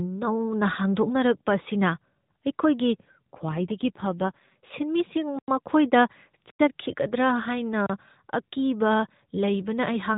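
AMR rate drop from 3.18 to 4.56 s: the speech turns rougher and more synthetic, consistent with the codec stepping down from 12.2 to 5.9 kbps, without any gap or band change.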